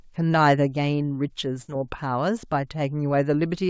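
At 1.62 to 1.70 s there's a burst of packet loss: about 60 ms of speech drops out, and the receiver continues the last sound and turns it down before resuming.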